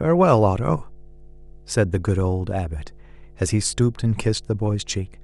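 From the first moment to the end, there's mains hum under the speech: a steady 50 Hz drone sitting roughly 25 dB below it. Power-line current is leaking into the signal, likely through a ground loop or a nearby transformer, and it never lets up.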